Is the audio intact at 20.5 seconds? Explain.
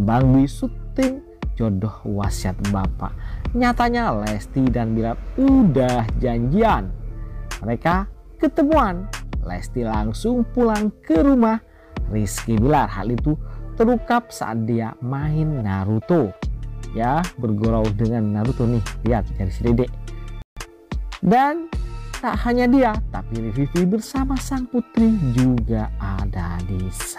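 No. A playback stall cuts the sound off at 20.42 s. It stays silent for about 148 ms, until 20.57 s, likely because the player ran out of data. A time-compressed catch-up follows from 20.57 to 20.71 s. The player cuts and cross-fades small pieces to run at 2.0 times speed, hurried but at normal pitch.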